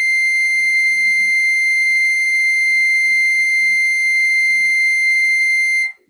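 No faults are audible anywhere in this music excerpt.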